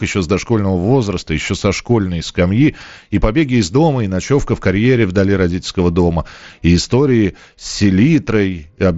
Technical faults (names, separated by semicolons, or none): none